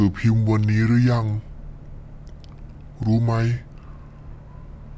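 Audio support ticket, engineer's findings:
Wrong sample rate, entire clip. Speech slow and low: runs at 0.73x speed, pitch down about 5.5 semitones, both shifting together. Fits 22 kHz material played out at 16 kHz with no resampling. Check output rate config and missing converter stage.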